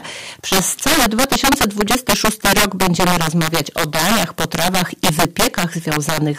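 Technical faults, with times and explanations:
Throughout, integer overflow: the signal was pushed about 10 dB past full scale and the arithmetic wrapped instead of limiting, so the few percent of samples over the ceiling flip to the opposite extreme, giving violent cracks on every loud peak, harsher than clipping.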